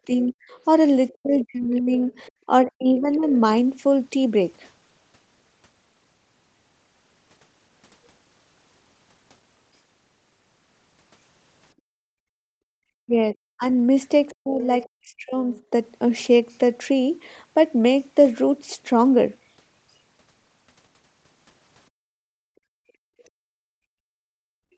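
Speech recorded through call processing, with four stretches where the talker's voice sinks sharply or breaks into pieces: 0.06 to 0.46 s, 1.14 to 3.28 s, 13.01 to 13.66 s and 14.37 to 15.55 s. The drops reach roughly 35 to 40 dB, covering about a third of a second, one and a half seconds, under half a second and about a second respectively. This is likely speech suppressed in double talk. With both sides talking at once, the echo canceller couldn't tell the local voice from the loudspeaker echo and turned everything down. In and just after that second stretch, faint scraps of a second voice surface at 2.26 to 2.32 s and 3.13 to 3.33 s, roughly 30 and 25 dB below the main speech. This is likely the other side's voice leaking through: the far end played on the device's loudspeaker was not fully removed from the microphone signal. The room sound itself falls away twice. From 11.75 to 12.73 s it dips by about 40 dB for around a second before recovering, and from 21.9 s to the end it drops by about 37 dB and stays down. 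Both are background gated by the echo canceller, which clamped the microphone hard while the loudspeaker was playing. The missing content above 8 kHz comes from the normal call microphone processing and band limit, which fits a 16 kHz sample rate.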